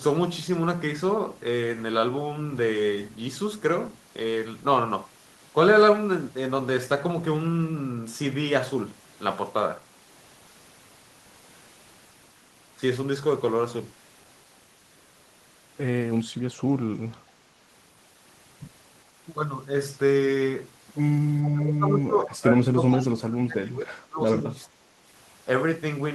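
At 21.42 to 21.49 s a faint delayed copy of the speech, around 15 dB down and 423 ms late, slips through: an echo leak, likely from incomplete echo cancellation. From 21.47 to 24.97 s the speech dips and breaks up, dropping by around 30 dB at worst. This is speech suppressed in double talk, likely an echo canceller muting overlapping talk.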